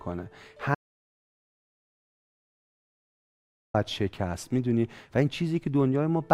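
At 0.75 s the speech cuts off dead until 3.74 s, an audio dropout to silence lasting just under 3 s. The gap holds no room tone at all, likely because the input was lost while recording carried on writing zeros, so that stretch is simply gone.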